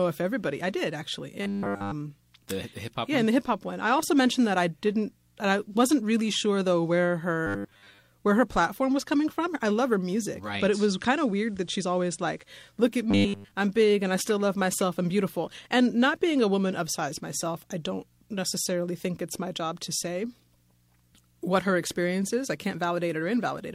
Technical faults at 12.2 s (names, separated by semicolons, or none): digital radio blending to analogue